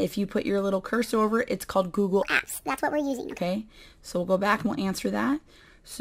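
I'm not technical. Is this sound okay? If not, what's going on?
No. From 2.23 to 3.39 s there is a wrong sample rate fault: the audio runs 1.5 times too fast and about seven semitones too high. This fits audio recorded at 32 kHz being played back at 48 kHz without conversion.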